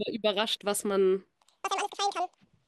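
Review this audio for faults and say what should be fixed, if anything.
Audio read two samples at a time (double speed), from 1.36 s to the end of the clip: the speech abruptly runs twice as fast and an octave higher, 12 semitones up, because the reader consumes sample pairs as single frames, which points to a mismatched channel count or sample width. To prevent this, make the reader's channel count and sample format match the stream's actual layout throughout playback.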